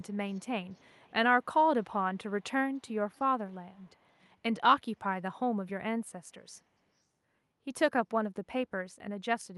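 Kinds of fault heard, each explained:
Echo leak: The far end was likely playing the call over a loudspeaker, and its echo canceller let part of what its microphone picked up slip through, sending the speech back 292 ms late. The returned copy is faint, about 35 dB below the speech and nearer 40 dB in the last stretch, and shows up at 0–0.46, 0.64–1.13, 2.75–2.94, 3.11–3.19, 3.51–3.55 and 3.74–4.24 s.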